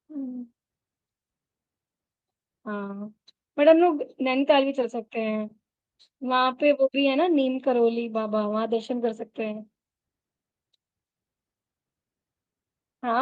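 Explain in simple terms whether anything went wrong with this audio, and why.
Nothing went wrong with this recording: the speech signal comes through intact, with no technical faults at any point.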